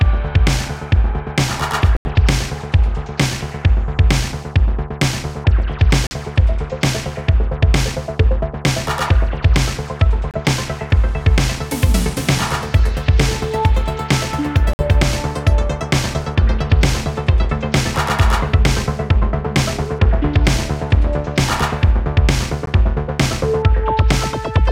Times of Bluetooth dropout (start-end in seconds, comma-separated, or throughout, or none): 1.97-2.06, 6.07-6.12, 10.31-10.38, 14.73-14.82, 22.66